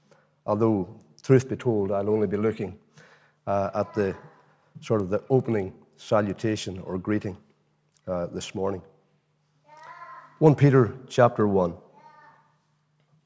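From 5.0 to 6.6 s there's a run of regular ticks at 10 Hz, and they only show up while there's signal. That's a resampler restarted on every block: the 48 kHz to 16 kHz conversion was done on 100 ms chunks separately, so each time the converter hit a block edge it was missing the real neighbouring samples and left a small error there. One tick per 100 ms block gives you that steady 10 Hz pattern.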